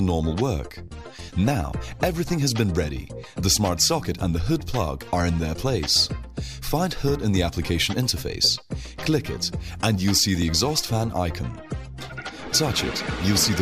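At 10.42 s a dropped buffer (overrun) is the likely cause: the hardware overwrote a block of samples before the program read it. Roughly a millisecond and a half is lost, and the two sides butt together, producing a tiny jump with no gap.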